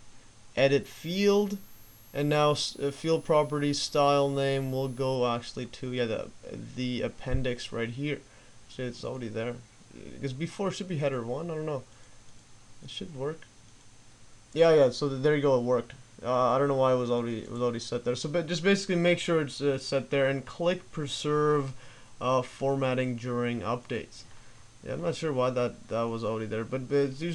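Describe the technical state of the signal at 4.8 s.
At 4.8 s you're still inside a switching supply whistle that runs from 0.83 to 5.15 s. A power supply is cycling in an audible burst mode or beating with another supply, leaving a thin, high whistle that wanders between 10.1 and 12.4 kHz, sitting roughly 30 dB under the main audio.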